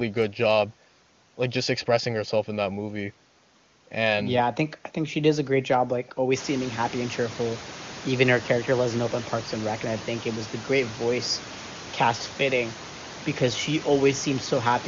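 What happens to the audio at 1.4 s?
Nothing goes wrong at 1.4 s; the speech there is intact.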